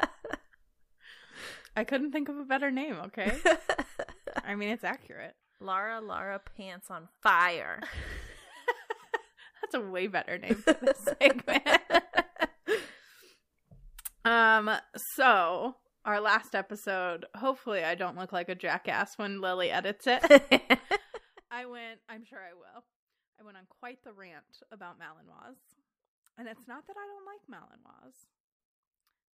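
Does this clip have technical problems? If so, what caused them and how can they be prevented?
Yes. Zipper noise: gain was changed in unsmoothed steps of about 3 dB, so each jump clicks. At 4.64–5.27 s, the level drops about 10 dB at roughly five steps per second. At 7.87–9.40 s, it rises about 10 dB at roughly two steps per second. Both sound like ticking. Interpolating gain per sample, or ramping it across each buffer, prevents this.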